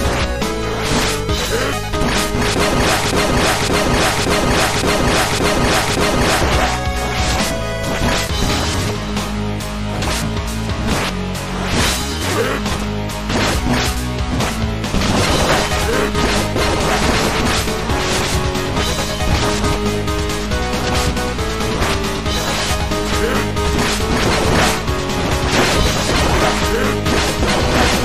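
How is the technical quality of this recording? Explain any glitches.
The recording has one clear glitch, a broken-record loop. From 3.06 s to 6.41 s, a fragment of about 0.57 s plays six times in a row, exactly the same each time and with no gap between repeats. The pattern points to a stall, likely in the player, encoder or stream, which kept putting out the last piece it held. You hear a stuttering, mechanical repetition. Whatever should have played during those three seconds is missing.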